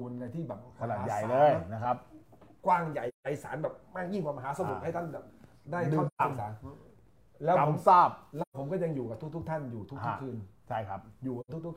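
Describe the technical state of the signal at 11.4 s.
At 11.4 s there is an AAC frame loss with muting, from 11.40 to 11.50 s. The decoder zeroed the missing spectrum, and the overlapping windows fade the sound out and back in, leaving a soft-edged gap of about 85 ms, which fits two lost frames.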